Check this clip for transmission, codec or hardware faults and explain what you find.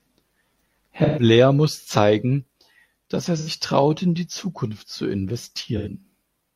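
AAC frame loss with concealment at 1.04–1.23 s, 3.38–3.49 s and 5.77–5.89 s: the decoder patches missing frames from the last good spectrum, leaving short smeared, noisy patches in the speech.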